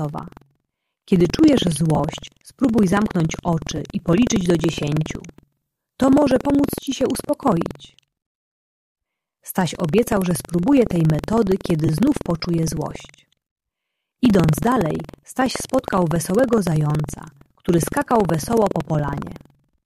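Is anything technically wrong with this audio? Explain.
Yes, two faults are audible.

Buffer tearing runs through the whole clip: a steady robotic buzz, close to a rattle, at about 21.5 Hz, riding on the sound wherever there is signal. The writing program and the playback hardware have drifted out of step around a ring buffer, so in each period a small slice, well under a tenth, is replaced by audio from roughly 150 ms earlier, with hard joins on both sides. That repetition rate fits a 2048-sample buffer.

Lost LE Audio frames cause brief dropouts at 1.96–2.00 s (30 ms), 3.77–3.79 s (15 ms), 11.86–11.89 s (22.5 ms) and 14.98 s. Each sounds like a short noisy smear. Bluetooth LE Audio frames failed to arrive, and the LC3 decoder filled each gap by reusing the last good spectrum with randomised signs. The gap lengths fit runs of one to four 7.5 ms frames.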